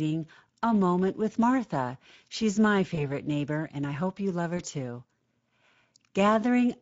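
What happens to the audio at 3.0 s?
At about 2.95 s to 3.07 s, just before "neighbor and I hope", a dropout is covered by VoIP packet loss concealment in the speech codec. Roughly 20 ms of data went missing, which fits a single lost frame. The decoder filled the gap by repeating its last pitch period and vocal-tract filter at falling gain, so the sound smears into a short buzzy tone or coloured noise that fades. Because each decoded frame builds on the previous one, the speech stays weak and blurred for a few tens of milliseconds after real data returns, until about 3.07 s. On a waveform this shows as a stretch of evenly repeating cycles with a shrinking envelope. On a spectrogram it shows as flat, unchanging harmonic stripes that dim, followed by muted onsets.

Underneath this, as across the whole clip, is the Speex codec. Its coding is plainly audible, and the damage fits a mid-range setting of roughly 17 kbps. 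With limited bits for the excitation signal, the voice has a hoarse, noisy grain rather than clean harmonics. On a spectrogram the harmonics look frayed and partly filled with noise between the stripes. On a waveform the periodic cycles are rougher and less regular than clean speech.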